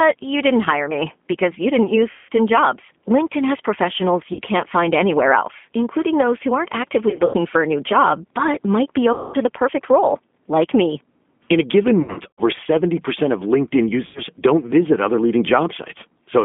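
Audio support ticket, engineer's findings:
G.729 codec, full clip. Speech band-limited to about 200 Hz to 3.5 kHz. Rough, slightly synthetic texture, plainly audible. Component: 8 kbit/s CELP voice codec, consistent with G.729A. It rebuilds speech from a vocal tract filter, a pitch predictor and a few pulses per 10 ms frame, so the fine detail is approximated. Spectrogram: hard ceiling near 3.5 kHz with nothing above 4 kHz, and grainy, smeared harmonics. Waveform: no distinct marker.

VoIP packet loss concealed by the speech codec, six events. Symptom: speech stretched into buzzy tone or coloured noise that fades, then weak or distorted onset as the decoder recovers from extrapolated state.
2.11 to 2.30 s, after "me because you didn't". About 180 ms lost, which fits 30 ms packets.
4.33 to 4.41 s. About 60 ms lost.
7.10 to 7.36 s, between "including those who aren't" and "for a new job". 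Scattered, longest gap 90 ms.
9.13 to 9.36 s, between "job but might be" and "to the perfect role". About 210 ms lost.
12.02 to 12.41 s. Scattered, longest gap 90 ms.
14.06 to 14.21 s. About 90 ms lost.
Spectrogram: repeated, unnaturally steady stripes or noise bands that fade out. Waveform: sustained fill decaying in amplitude.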